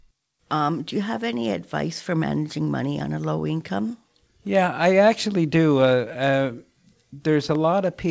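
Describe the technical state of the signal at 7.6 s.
A single sharp loud pop sits on top of the speech from 7.55 to 7.57 s, peaking a few decibels above it, while the speech carries on underneath. A sudden voltage pulse, likely from a switch, static or driver glitch, entered the chain and was shaped by the circuits after it.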